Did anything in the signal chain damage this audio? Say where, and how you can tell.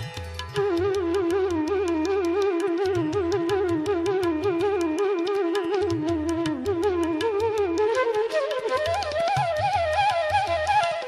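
No, nothing audible points to damage at any stage of the signal chain, so the audio reaches the listener as it left the source.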